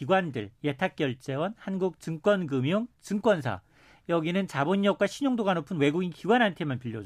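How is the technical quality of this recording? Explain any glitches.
The recording has one fault, present throughout. It is crude rate conversion. The speech seems to have been raised from 32 kHz to 48 kHz by linear interpolation, without filtering. This leaves a faint gritty fizz, around 40 dB below the speech, that follows louder and brighter sounds.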